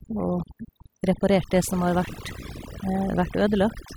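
Speech runs through the whole clip with overdone noise removal applied from start to finish. The noise reducer was pushed too hard, so individual frequency bands that sit close to its noise estimate are pulled far down or switched off entirely. Quieter components of the voice get caught along with the noise. The background drops and breaks up into twinkling specks.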